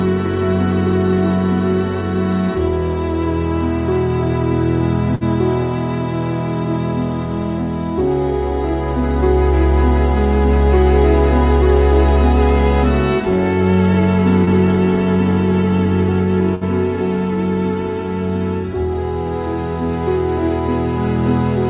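Burst of packet loss at 5.15 to 5.24 s: several consecutive packets were lost or arrived too late to play. The receiver stretched the last sound for about 56 ms, fading it into a held buzz or hiss, then skipped about 60 ms of audio.

Short concealed packet loss at 14.45 to 14.50 s: a few hundredths of a second missed the decoder. About 21 ms of synthesised continuation covers the hole, then blends back, leaving a brief smear or wobble where about 30 ms is lost.

A second burst of packet loss at 16.55 to 16.64 s repeats the pattern, with about 61 ms of fading concealment and about 60 ms dropped. Throughout, the call path's narrowband codec leaves nothing above 4 kHz.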